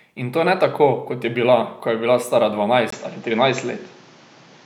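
From 2.90 s to the end the speech loses its top end, with nothing above 7.6 kHz, picks up a new noise floor well below the signal, and keeps the same level. A 20 ms gap marks the change, likely an input switched to a poorer device.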